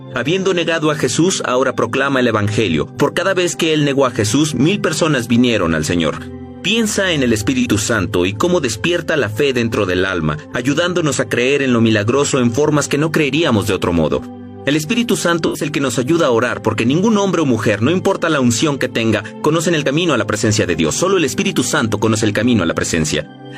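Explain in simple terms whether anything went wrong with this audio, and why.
Two brief smeared, noisy patches occur: one at 7.60 to 7.66 s, and a longer one at 15.46 to 15.65 s. This is AAC frame loss with concealment. Small chunks of the compressed audio went missing, and the player papered over each gap by reusing the sound just before it.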